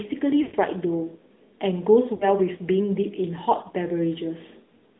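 Speech carried over the AMR narrowband mobile codec, band-limited to roughly 200 Hz–3.7 kHz, with plainly buzzy, synthetic coding damage consistent with a mid-rate mode near 10 kbps. Lost AMR speech frames appear twice. From 0.42 to 0.57 s, the decoder stretches the last sound and fades it toward silence, which points to about 120 ms of missing frames. At 2.16–2.29 s, a shorter gap produces a brief warble before the signal recovers.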